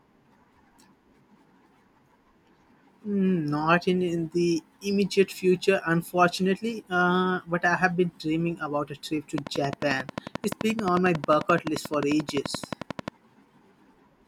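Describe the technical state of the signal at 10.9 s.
At 10.9 s the signal is carrying a train of clicks, running from 9.38 s, just after "about a trip to", to 13.09 s. Around forty near-identical pulses arrive at a regular 11.4 per second, peaking roughly 10 dB above the speech, so they register as a steady ticking laid over the speech and through the pauses. The evenly spaced, repeated pulse shape likely points to interference from nearby equipment or a faulty connection or power supply.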